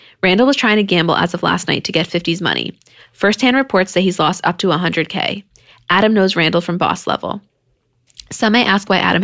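No technical faults can be heard anywhere in this speech recording. There is nothing to place on a timeline, so no event calls for description.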